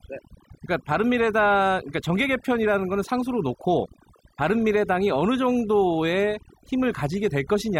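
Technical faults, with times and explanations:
Throughout: overdone noise removal. Aggressive noise reduction silences frequency bands near the noise estimate, leaving twinkling specks in the background.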